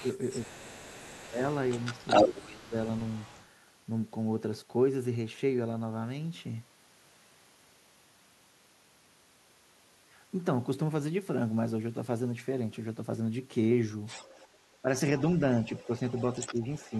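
Other side's voice leaking through runs from 0.00 to 3.46 s, then again 14.06 to 14.77 s and 15.18 to 17.00 s: a second voice sits roughly 15 dB under the talker, likely loudspeaker sound the echo canceller failed to strip from the microphone. Speech suppressed in double talk overlaps it at 0.56 to 1.39 s and 2.27 to 2.74 s, where the talker's level dips by up to about 20 dB. Briefer, shallower dips follow at 14.82 to 14.87 s and 16.51 to 16.92 s, likely the canceller ducking both voices while they overlap.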